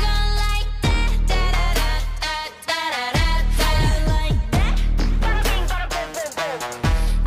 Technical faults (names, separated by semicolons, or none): none